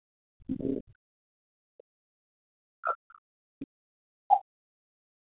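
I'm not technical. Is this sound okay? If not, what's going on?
No. From the start to 2.3 seconds, and again from 2.76 seconds to the end, the voice drops to almost nothing. That's speech suppressed in double talk, likely the call's echo canceller muting everything while both sides spoke at once.

Around 4.30 to 4.37 seconds, a brief scrap of the other side's voice leaking through pops up, about as loud as the talker, likely loudspeaker sound the echo canceller missed.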